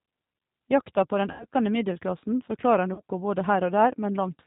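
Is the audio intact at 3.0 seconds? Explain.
No. From 2.94 to 3.01 s, just after "middelklassen forklarar", the speech smears into a buzzy tone or coloured noise that sags in level, and it takes a short while after 3.01 s to regain full strength. This is VoIP packet loss concealed by the speech codec. Roughly 40 ms of audio never arrived, which fits two lost packets. The decoder filled the gap by repeating its last pitch and filter settings at falling gain. Because each frame is built on the one before it, the damage lingers briefly after real packets return.

The same moment also carries the G.729 codec damage heard across the whole clip. Nothing above 4 kHz comes through, and the speech has a rough, slightly synthetic grain. The codec rebuilds the signal from a vocal tract filter, a pitch predictor and a few pulses per frame rather than keeping the original waveform, which fits an 8 kbit/s G.729A stream.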